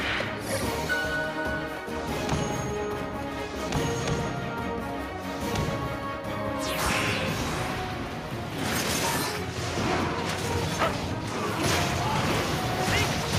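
No dropouts, clipping, glitches or other technical faults turn up anywhere in the recording.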